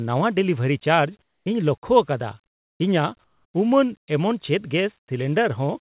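A speech clip carried over a narrowband call path, with nothing above 4 kHz. In three pauses, at 1.22 to 1.46 s, 2.46 to 2.80 s and 3.24 to 3.54 s, the real background gives way to flat, featureless hiss. Each time it drops, by about 14, 21 and 6 dB. This is comfort noise in place of the background, likely from discontinuous transmission. The sender goes quiet, and the receiver fills the gap with synthetic noise.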